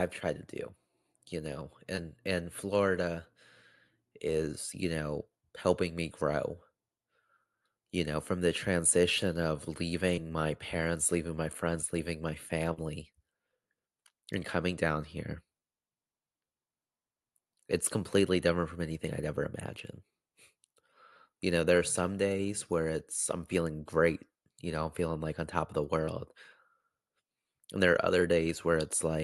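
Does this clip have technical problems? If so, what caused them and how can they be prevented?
Yes. At about 1.95 to 1.99 s there is a short concealed packet loss: roughly 20 ms of the speech never arrived at the decoder in time, and the receiver synthesised a stand-in by extending the preceding sound, then crossfaded back into the real signal. It is heard as a brief smear at that point. The call codec's audio is band-limited to about 12 kHz, consistent with Opus. A larger jitter buffer, forward error correction or a more stable network path would prevent it.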